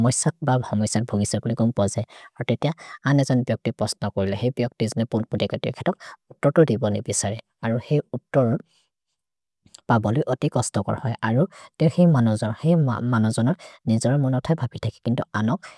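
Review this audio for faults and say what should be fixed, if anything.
No faults; nothing needs fixing.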